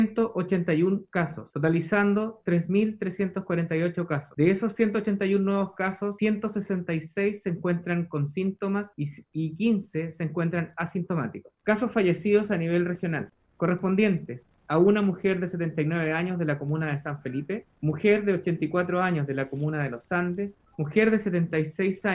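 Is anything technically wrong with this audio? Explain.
No, nothing technically wrong can be heard in this audio. There is no fault to point to at any moment in the clip.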